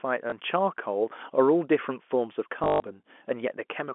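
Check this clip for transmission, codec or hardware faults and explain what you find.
Two dropouts are audible, both packet loss with last packet repeated, heard over the narrow telephone band of the G.711 coding. The first is a small blip at 0.30–0.32 s. The second, from 2.64 to 2.84 s, loses 160 ms in gaps, with a longest run of 120 ms. Each gap is filled by looping the previous 20 ms packet out of step with the pitch, and the longer run buzzes robotically at 50 Hz.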